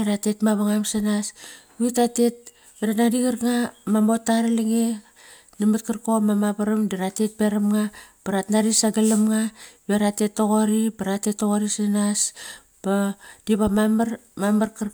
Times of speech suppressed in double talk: none

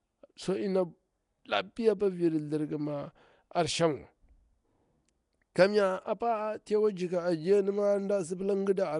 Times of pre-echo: 5.55

